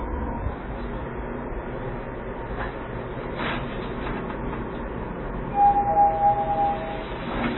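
From start to finish the audio carries heavy MP3 compression damage. Nothing is left above 4 kHz, so the top end sounds dull and boxed in. The coding is starved of bits, which fits a bitrate around 16 kbps. Quiet frequency components drop in and out between frames. That gives a watery, swirling texture with metallic chirps. Sharp onsets are smeared rather than crisp. Low-bitrate MP3 encoding is the likely cause.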